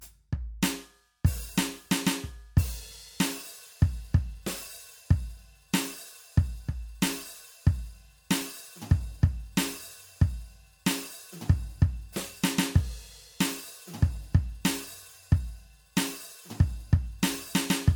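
Across the whole music clip there is generation loss: the sound is swirly and hollow, with smeared transients and a watery shimmer in the highs, more degraded than a single 96 kbit/s MP3 would be. The likely cause is repeated MP3 decoding and re-encoding, around three passes, each requantising on a shifted frame grid. On a spectrogram, nothing appears above 20 kHz, and the upper bands show patchy, flickering holes. In the waveform, attacks look softened and pre-smeared.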